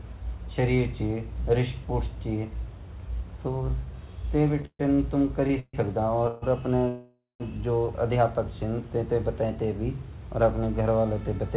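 From 4.62 to 5.75 s the speech shows repeated stalls (stutter). Packets arrived late, and the jitter buffer kept running dry. Six gaps were filled by stretching the last sound, about 354 ms in all, the longest 141 ms. Nothing is lost, but the speech drags and stutters.

At 6.27 s comes a call audio freeze lasting 146 ms. A second freeze runs from 6.88 to 7.42 s, 519 ms long. The likely cause is packets held up in transit, so the buffer emptied. The receiver continued the last sound as a fading buzz. In the longer freeze it dies to 160 ms of silence. The speech then resumes where it stopped, with nothing lost. Throughout, the narrow band ending at 4 kHz fits a G.711 call path.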